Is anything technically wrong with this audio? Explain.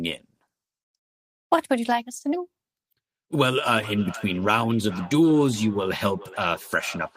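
Yes. From 3.73 s to the end of the speech there is a feedback echo between two devices. Each phrase comes back roughly 0.4 s later, with the strongest repeat about 18 dB below the direct speech. Two devices in the same room are on one call. One plays what the other's microphone sent, and that microphone picks it up again. Each echo canceller removes only its own device's playback, so the loop is never cancelled.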